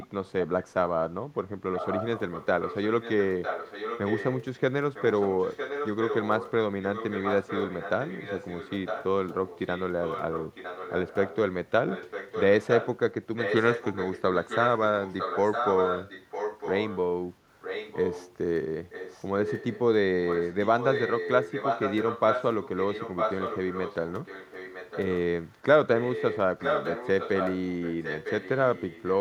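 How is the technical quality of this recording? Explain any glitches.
The recording has an echo leak running through most of the speech: at 0.0–0.45 s, 1.75–16.98 s, 17.61–18.33 s and 18.87–29.14 s. A second copy of the speech trails the original by about 955 ms, roughly 15 dB below it at first, about 10 dB down around 18 s, and only about 5 dB down in the long stretches. The likely cause is a far-end loudspeaker whose echo canceller let the sound back through. Unlike room reverberation, this is a distinct, late repeat, not a smear.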